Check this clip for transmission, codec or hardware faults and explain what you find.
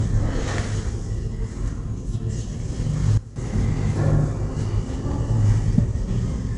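Two faults are audible: a constant codec texture across the whole clip and a brief drop in level just after three seconds.

Throughout, every louder moment carries a gritty hiss that rises and falls with the sound, sharp onsets sound roughened, and nothing is present above about 10.7 kHz, so the top end is dull. This is 4-bit ADPCM compression. Each sample is coded as a coarse 4-bit step from a predicted value, so the quantisation error rides along at the signal's level, and the step size lags on fast attacks. The damage is plainly audible, and it fits a stream of roughly 88 kbps at a reduced sample rate.

From 3.18 to 3.36 s, everything, including the background noise, abruptly falls by about 14 dB and then jumps back, with hard edges at both ends. This is a sudden gain jump. The level changes from one sample to the next with no fade, most likely because a gain setting or bit shift was applied instantly rather than ramped. 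That is why sound and noise floor step down and up together.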